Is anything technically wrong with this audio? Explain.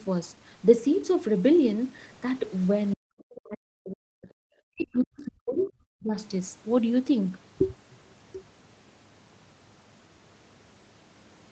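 Yes. From 2.95 to 4.29 s and from 4.63 to 6.16 s, the speech dips by as much as about 40 dB. This is likely speech suppressed in double talk: the echo canceller could not separate this side's speech from the overlapping far-end echo and turned both down.

From 4.80 to 4.85 s and from 5.59 to 5.66 s, brief fragments of a second voice appear, about 25 to 30 dB below the speech. This is likely the other side's voice leaking through as residual echo.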